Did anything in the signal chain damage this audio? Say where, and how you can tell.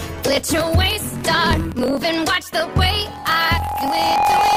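Yes. Throughout, a 43.1 Hz buzz rides the audio, which runs 1.12 times fast at normal pitch: a buffer-stage block size mismatch (truncated), with tails discarded after what fits 1024-sample reads.

From 2.86 s to the end, an 819 Hz tone swells over about one and a half seconds to about 5 dB above the sound: loudspeaker feedback squeal, a microphone re-amplifying its own speaker.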